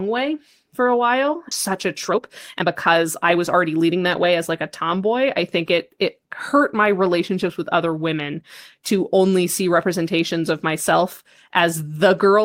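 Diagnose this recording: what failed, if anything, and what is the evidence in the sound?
A network- or buffer-stage skip ahead follows "way for a while" at 1.51 to 1.53 s: about a second of speech is gone, and the waveform splices abruptly with no silent gap.

A jitter buffer speed-up runs from 1.71 to 5.01 s, before "I think it it". Pitch-period cuts remove roughly 300 ms and play speech at 110%, with compressed syllable spacing on the spectrogram.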